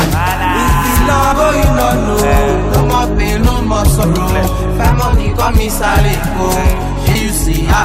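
At 1.31 s, 4.03 s and 7.14 s there is a short glitch, each under 20 ms, from damaged data in a compressed stream. Corrupted bytes make the decoder misread a frame and lose sync until it finds the next frame header.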